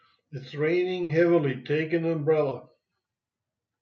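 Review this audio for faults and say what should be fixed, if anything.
A burst of packet loss at 1.03 to 1.11 s leaves about 60 ms of speech missing. The receiver stretches the last sound, which shows as flat, fading harmonics or noise before the onset jumps ahead.

A short concealed packet loss at 2.49 to 2.53 s is a 20 ms patch synthesised from the preceding sound, heard as a brief smear and seen as a slightly blurred spectrogram column.

Adding forward error correction and a deeper adaptive jitter buffer would prevent both.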